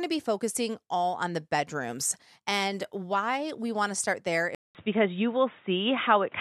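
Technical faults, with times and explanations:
4.55–6.41 s, input switched to a poorer device: Right after "want to start there" the audio drops out for about 0.2 s, then returns dull and boxy to the end, with nothing above 3.8 kHz, a level shift of about 5 dB and a new faint noise floor about 40 dB below the speech. The likely cause is the recording input changing mid-take to another microphone or a headset's narrowband call profile, whose limited bandwidth, different gain and own self-noise replace the original capture.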